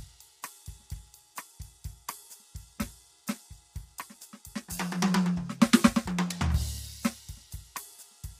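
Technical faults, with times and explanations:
Throughout, low-delay AAC compression: grainy, rough music with nothing above 15.6 kHz, likely from AAC-ELD's short frames starved of bits, fitting about 32 kbps.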